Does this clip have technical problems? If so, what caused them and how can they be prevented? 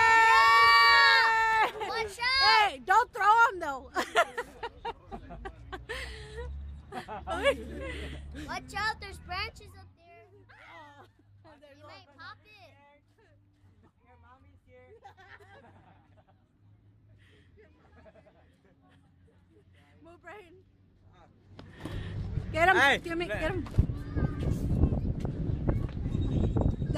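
No, this clip has no technical problems, so there is nothing to prevent.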